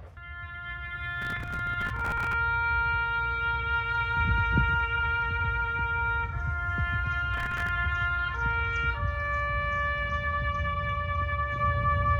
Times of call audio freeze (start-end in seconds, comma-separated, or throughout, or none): none